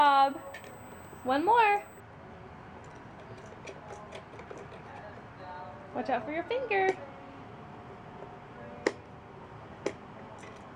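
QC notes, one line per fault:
0.00–2.00 s, USB whine: current drawn by the USB bus in 125-microsecond microframes is leaking into the audio path through the shared power or ground, which puts a fixed-pitch tone at 8 kHz under the sound. Its harmonic at 16 kHz is the strongest part, so the whine sits high and thin rather than as a hum. It runs roughly 25 dB below the signal and stops at 2.00 s.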